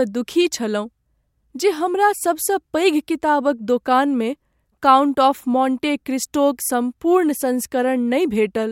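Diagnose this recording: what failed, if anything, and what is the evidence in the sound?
Nothing failed: no stage in the chain, from wiring through to playback, leaves any audible mark on the speech, so there is no evidence of a fault to report.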